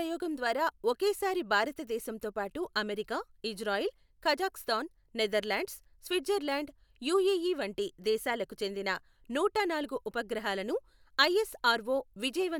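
No technical faults can be heard anywhere in the speech recording, and the signal stays intact and continuous throughout.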